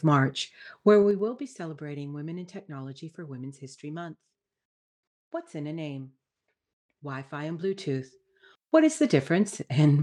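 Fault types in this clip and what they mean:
zipper noise: A rapid ticking, like a zip being drawn, rides on the speech while the level moves. It appears first as the level falls by roughly 15 dB between 0.94 and 1.45 s, then as it rises by a similar amount between 7.25 and 8.70 s. The gain changes in unsmoothed jumps, 2 dB each on the way down and 1 dB each on the way up, around ten per second, and every jump leaves a small click in the waveform.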